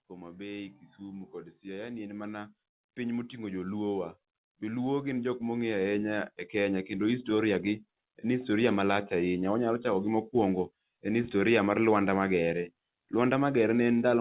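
Automatic gain rising runs through this speech clip from 0.08 s to 8.55 s, ending just before "malach ahinya". The gain control judged the incoming level too low and kept pushing its gain up over those eight-odd seconds, by about 15 dB in total, so the voice and the background behind it swell together rather than the voice alone getting louder. The audio has passed through a call path whose narrowband coding leaves nothing above 4 kHz.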